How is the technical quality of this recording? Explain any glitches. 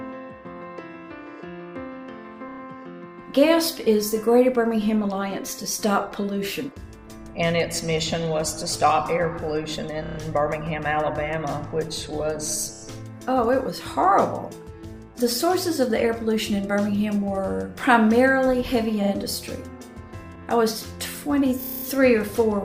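The recording has repeated frames stuttering at six spots: 2.48–2.60 s, 10.02–10.18 s, 12.73–12.82 s, 19.03–19.11 s, 20.35–20.38 s and 21.60–21.85 s. A tiny chunk of compressed audio, 30 ms each time (40 ms at 19.03 s), got decoded over and over, so you hear a rapid stutter. The longest run, near 21.6 s, repeats eight times and stretches the sound by 240 ms.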